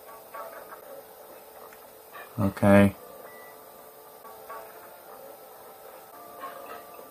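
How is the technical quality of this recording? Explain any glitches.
The recording has three brief glitches, at 0.80 to 0.83 s, 4.22 to 4.25 s and 6.10 to 6.13 s. Each time, the audio jumps forward with a 30 ms disturbance. The likely cause is a broken MP3 bit reservoir: after frames of about 26 ms went missing, the next frame drew its borrowed data from the wrong bytes.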